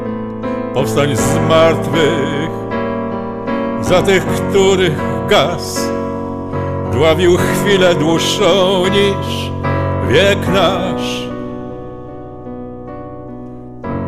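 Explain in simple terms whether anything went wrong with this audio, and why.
There's sample clock jitter all the way through. The converter's timing wobbles by under a microsecond, adding a faint hiss that grows on loud, bright sounds.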